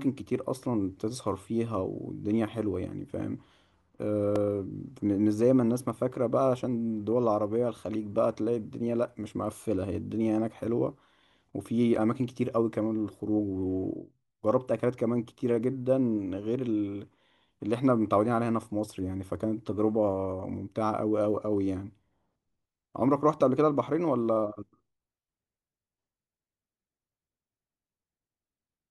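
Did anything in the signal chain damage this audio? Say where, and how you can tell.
Yes. Two brief clicks or buzzes in the speech, at 4.36 s and 11.96 s, are repeated buffers at the driver or buffer stage. New audio arrived late, so a 2.9 ms block, which fits a 128-sample buffer, played a second time with hard joins.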